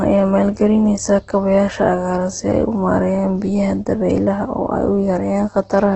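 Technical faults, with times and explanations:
Throughout: Opus compression. Everything above about 8.2 kHz is gone, and the speech has a heavily grainy, rough texture, with voiced sounds turning noisy instead of clean. That's most likely Opus running in its music-oriented CELT mode at a very low rate, something like 12 kbps. It keeps each band's energy but fills the bands it can't afford with folded or noise content, so you get grit rather than swirl, all squeezed into a wideband range.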